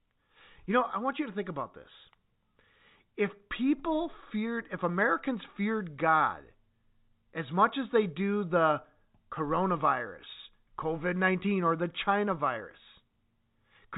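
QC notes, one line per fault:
No faults are present in the speech, which carries the narrow band of G.711 telephone coding, with nothing heard above 4 kHz and only the faint, level-following grain that the format itself brings.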